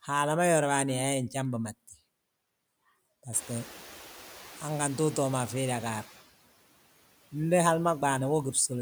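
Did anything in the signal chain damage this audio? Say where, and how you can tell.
Yes, in the call processing stage, where the noise suppressor is catching up. Around 3.5 s the room noise jumps by about 18 dB, and from 3.32 s to 5.56 s that noise comes through with less reduction, then gradually sinks. The suppressor's noise estimate trailed the sudden rise and took about 2.24 s to adapt, removing only about 4 dB meanwhile. After that the room noise settles about 20 dB below the speech.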